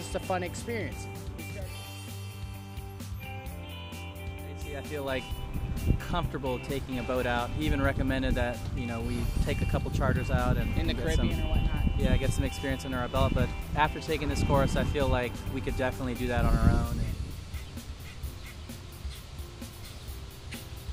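Timecode bleed runs through the whole clip. Linear timecode from a neighbouring track or cable has leaked in. Its square wave flips between roughly 1 kHz and 2 kHz, at a rate that fits 29.97-frame code. A faint chirping warble sits about 30 dB below the sound.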